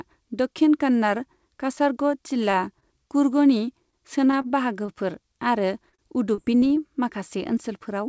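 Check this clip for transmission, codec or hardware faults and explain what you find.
Two kinds of transmission fault are audible in this speech, both from packets arriving late or not at all on the call path, whose band stops at 8 kHz.

Short stalls from late packets occur at 2.51 to 2.73 s, 2.80 to 2.85 s, 3.90 to 3.95 s, 4.42 to 4.47 s and 4.86 to 4.91 s. Each time the jitter buffer ran dry, so the last sound was stretched by 16 to 25 ms before resuming, which briefly drags or buzzes.

Repeated packet loss runs from 5.90 to 6.74 s. Five gaps were patched by extending earlier sound, the longest 35 ms, with about 90 ms genuinely lost, giving choppy speech.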